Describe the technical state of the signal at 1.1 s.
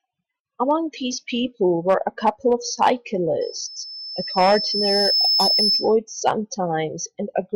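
At 1.1 s the speech signal is intact, with no dropout, distortion or other audible fault at that moment.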